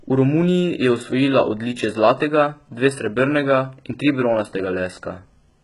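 Throughout the speech, the treble sounds synthetic. There is nothing above 11.1 kHz, and the s sounds come out gritty and metallic rather than clean. This is likely HE-AAC compression at heavy damage, which fits a very low bitrate around 12 kbps. Only the lower spectrum is truly coded, and the highs are copied upward from it, so harmonics misalign at the crossover. Plain band-limiting would sound dull; here the treble is present but false.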